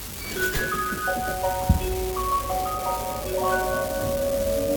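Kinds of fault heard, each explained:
Unreliable data bit: a marginal data line intermittently flips one bit, so a random share of samples jumps by the same fixed step of about -20 dBFS. Each flip is a spike, and together they form a steady crackle that continues through pauses across the whole clip.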